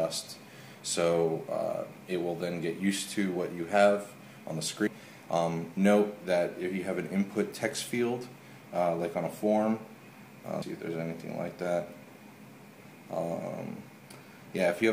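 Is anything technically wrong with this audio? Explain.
Yes. Audio missing between chunks, at 4.87 s and 10.62 s. The recorder likely handled the sound in 6-second chunks and dropped roughly a third of a second at each handover. The surrounding audio is butted together without a gap, so the sound jumps ahead abruptly.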